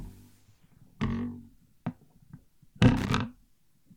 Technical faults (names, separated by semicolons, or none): loose connector crackle